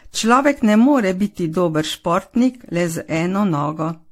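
Speech with generation loss throughout. It sounds swirly, hollow and smeared, with blurred attacks and nothing above 16.6 kHz. This fits likely repeated AAC encoding, about five passes.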